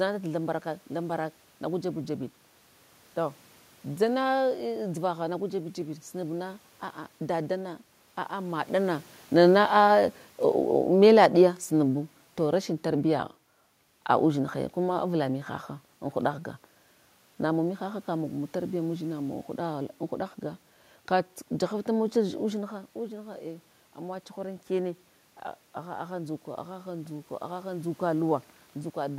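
From 8.72 s, just after "a dadana aa", the speech and the room noise behind it sink together by about 6 dB, easing down until 15.41 s. This is automatic gain falling: the gain control judged the input too loud, or its background noise too strong, and lowered its gain gradually, shortly after the talker moves near 8.5 s.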